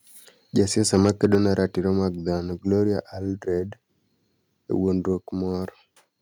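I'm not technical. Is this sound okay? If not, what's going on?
No. From 0.93 to 1.35 s there's microphone overload. The loudest moments sound harsh and crackly, likely because the microphone input was set too high. At 1.35 s, just before "ne ratiro mag", there's a microphone volume step down. The speech suddenly gets quieter, likely because the call software turned the microphone down after that distortion.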